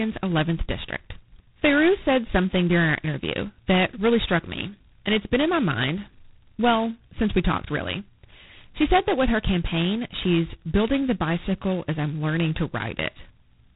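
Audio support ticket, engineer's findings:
G.726 ADPCM throughout: harsh rasping hiss tracking speech level, consistent with 16 kbit/s; 2-bit prediction error. Spectrogram shows a hard ceiling at 3.8 kHz and grainy noise smearing between harmonics.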